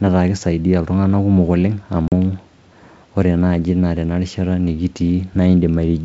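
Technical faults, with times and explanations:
2.08 to 2.13 s, packet loss on an ADPCM call: 40 ms drops to hard-edged silence. The decoder's predictor and step size lose sync, so the sound resumes briefly distorted.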